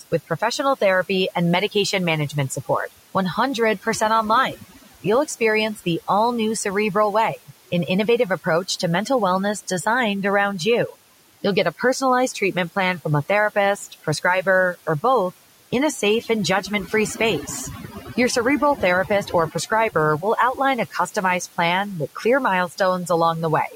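Overdone noise removal runs through the whole recording: the noise reduction is set so aggressively that any frequency band sitting close to its noise estimate gets pushed far down or switched off entirely. The room noise, which sits about 24 dB below the speech, is largely stripped away, leaving near-silence dotted with twinkling, chirpy specks. Quieter parts of the speech fall into the same trap.

Between 4.56 and 4.87 s there is speech cut by the noise suppressor. Here the suppressor mistakes part of the speech for background and turns it down along with the noise, by about 11 dB at the deepest point. Only around a tenth of a second within that span is actually affected, but those moments sound swallowed and faint, as if a soft sound or word ending briefly drops away.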